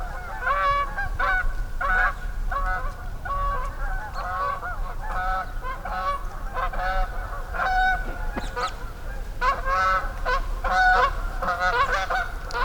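No technical faults can be heard anywhere in this recording of sounds. Nothing in the audio calls for a timestamp or a correction.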